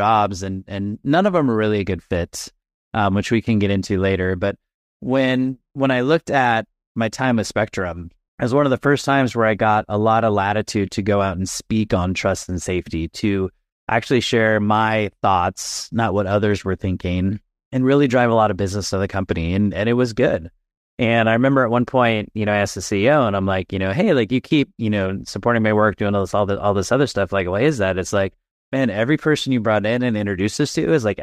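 Nothing in this recording stands out as a technical fault at any point, so there's nothing to flag here.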